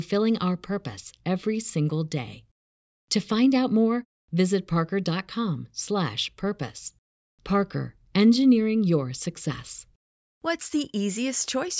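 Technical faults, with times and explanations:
No technical faults can be heard in this speech clip. There is nothing to list with a time or an explanation.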